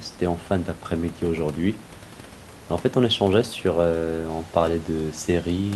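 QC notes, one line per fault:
Nothing to flag here, just the speech with a bit of room noise sitting about 23 dB underneath it, which is part of the recording itself.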